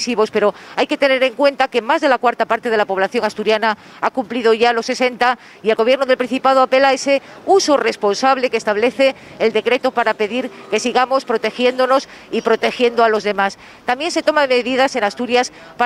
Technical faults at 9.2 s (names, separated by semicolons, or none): none